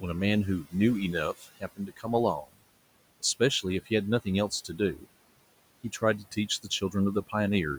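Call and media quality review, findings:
Noise suppressor artifacts, whole clip: background pulled down by about 21 dB between phrases, then rising again under speech. Probable component: noise suppressor gating bands frame by frame. Room noise itself sits about 20 dB below speech. Only its level pumping with speech points to processing. A noisy room alone would not swing like that.

Speech cut by the noise suppressor at 0.63–0.74 s, 1.33–2.06 s, 2.42–2.63 s, 3.2–3.91 s, 4.25–5.07 s and 5.84–6.94 s: soft consonants and endings swallowed, dropping about 19–22 dB in the first four spans and about 12 dB in the last two. Affected portions are brief, from a tenth of a second to under half a second. Probable component: the same suppressor misjudging quiet speech as noise. Unlike a dropout, the sound thins and fades rather than stopping abruptly.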